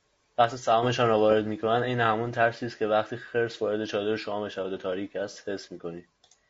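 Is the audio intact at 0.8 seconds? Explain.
No. At 0.8 s, as throughout, the speech sounds rough and grainy with noise between harmonics, likely low-delay AAC compression whose short frames resolve pitch poorly, fitting roughly 32 kbps.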